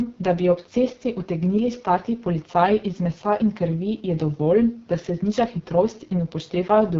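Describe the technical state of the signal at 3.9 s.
At 3.9 s the speech carries AMR wideband (HD Voice) codec damage that runs through the whole clip. The roughness is heavy and raspy, which fits the lowest 6.6 kbit/s mode. A pulse-excited vocal tract model rebuilds the band up to 6.4 kHz, and shaped noise fills in above it. On a spectrogram, energy stops abruptly near 7.5 kHz, and the harmonics look smeared and grainy instead of cleanly striated.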